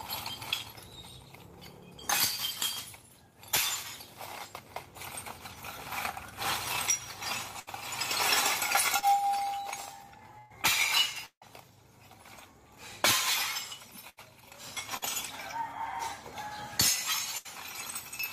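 At 7.59 to 7.70 s the sound is briefly frozen into a held buzz or fading hiss before the audio picks up further along. This is a burst of packet loss: roughly 80 ms of audio never arrived, and the receiver stretched the last sound for about 70 ms to cover the hole. The material in between is simply gone.

Around 9.0 s (8.99 to 9.05 s) there is a quick smear, a small wobble rather than a gap. This is short concealed packet loss: about 40 ms failed to reach the decoder in time, and the receiver filled it by extending the preceding sound before blending back into the real signal.

From 10.38 to 10.53 s comes another burst of packet loss, longer this time. About 120 ms is missing, and the fading stand-in carries through nearly all of it with no silence at all.

At 11.26 to 11.44 s the sound again turns into a decaying buzz or hiss, but this time it dies away to about 90 ms of silence before the audio returns, with the lost section skipped. 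That fade into silence is the mark of a long network dropout, likely a stall in delivery, with about 160 ms never played.

The same burst of packet loss returns at 14.09 to 14.20 s, 14.97 to 15.04 s and 17.37 to 17.48 s, each a short held, fading patch where about 40 to 80 ms of audio was lost and replaced by the receiver's continuation of the last sound.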